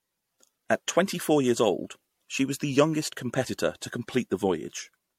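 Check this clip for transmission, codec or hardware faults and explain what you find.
Generation loss runs throughout the speech. The sound is swirly and hollow, with a smeared, watery texture. Consonant attacks blur instead of landing crisply, and nothing is present above 16.5 kHz. The likely cause is repeated lossy coding: the audio seems to have passed through an MP3 encoder, consistent with 64 kbit/s, about three times. Each pass quantises again on a shifted frame grid, so its noise and spectral holes stack on the last.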